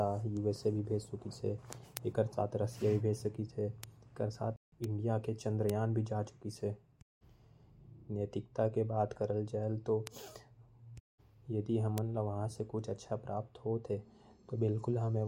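Bit error spikes at 1.97 s and 3.84 s each sound as a single sharp tick, bright across the whole spectrum and unrelated to the speech. A flipped bit throws one to three samples off by a power of two before they snap back. A playback stall from 4.56 to 4.72 s cuts the speech off mid-flow for 160 ms of silence, likely because the player ran short of data or its thread was blocked, before the sound resumes. The same ticks recur at 4.84, 5.70, 10.07 and 11.98 s.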